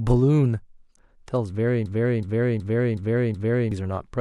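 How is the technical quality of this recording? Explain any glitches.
The recording has one serious glitch, a system hang loop, from 1.86 s to 3.72 s. The computer or its audio driver stalled while the sound hardware kept replaying the same ring buffer. A 0.37 s stretch, which fits a 16384-sample buffer, repeats exactly five times at about 2.69 per second. The result is a slow, mechanical stutter of the same fragment. Roughly two seconds of the speech that should have followed are missing.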